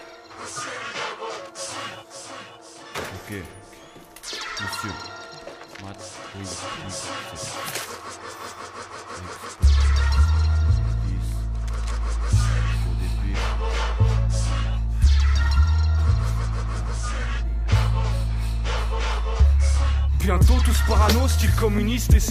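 No faults detected anywhere in the audio.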